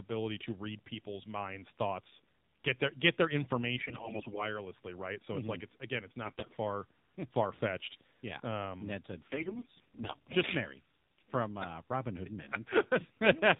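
Throughout, the speech runs through the AMR narrowband mobile codec at a low mode, which fits about 7.4 kbps. Nothing above 4 kHz survives, and the voice sounds plainly buzzy and synthetic.

AMR bit errors then corrupt the weakly protected bits of the frames, roughly one bit in seven to ten. This misplaces the excitation pulses and skews gain and spectrum, so the voice keeps its pitch but turns hoarse and gargly. It happens from 3.82 to 4.45 s, after "get their get their" and before "right so it's"; from 6.22 to 6.55 s, after "like it's again it's"; and from 9.32 to 10.16 s, after "yeah um ned said".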